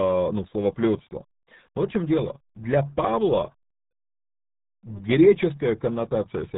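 From start to finish the speech carries the sound of the RealAudio 14.4 codec, the dial-up era RealAudio 1 coder. Nothing passes above about 3.9 kHz, and the heavy modelling damage, consistent with a squeeze to roughly 8 kbit/s, leaves the voice muffled and gargly. A simple low-pass filter or telephone band would dull the speech but keep it smooth; here the vowels themselves bubble and smear, which marks a low-rate codec rather than filtering alone.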